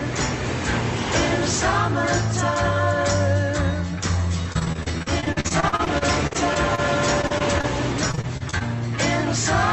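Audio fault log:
4.43–6.80 s, 7.22–7.65 s and 8.11–8.62 s: repeated packet loss (robotic sound). Short gaps of up to about 40 ms keep being patched by stretching the previous sound, giving a choppy stutter with pieces missing rather than one clean dropout.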